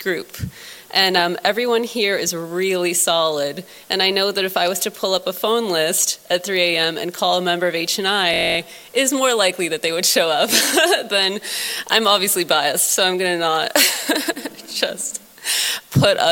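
From 8.34 to 8.57 s there is a system hang loop: the playback side stalled while the hardware kept replaying its ring buffer, so one 23.22 ms slice repeats ten times, which fits a 1024-sample buffer. At 43.1 Hz it sounds like a brief steady buzz. The waveform shows ten identical blocks. The spectrogram shows a comb of harmonics spaced 43.1 Hz apart with vertical striping. Essentially no audio is lost.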